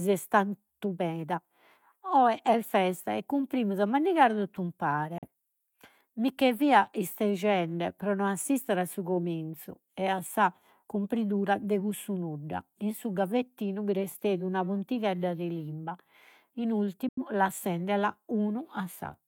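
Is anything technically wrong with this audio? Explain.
Yes, there are two digital broadcast dropouts in this speech. The first runs from 5.18 to 5.27 s and the second from 17.09 to 17.23 s, right after "puntighedda de limba in". Each time the receiver lost good frames and muted, fading to silence in about 3 ms before the sound came back. The first hole, about 43 ms of lost audio, fits a single bad frame. The second is roughly twice that, which points to two frames. Whatever was spoken in those gaps is gone.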